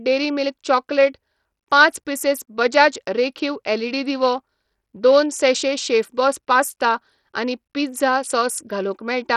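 A speech recording that sounds gritty and coarse from start to finish, with the treble flickering in and out rather than holding steady and a rough, grainy noise riding on the voice, even though content reaches up to about 20.9 kHz. This is most likely Bluetooth SBC compression: at roughly 64 kbps a starved bit pool leaves the upper sub-bands with few or no bits and quantises the rest crudely, producing this heavy damage.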